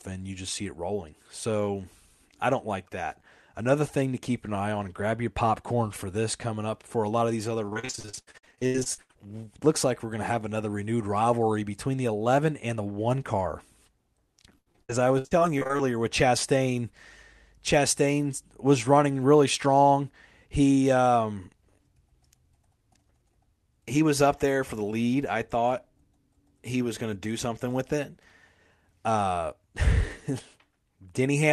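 From 7.65 to 9.25 s the speech turns choppy and robotic, with about half the stretch patched over, and again from 14.58 to 15.81 s. This is repeated packet loss: holes up to about 80 ms, each filled by stretching the preceding sound.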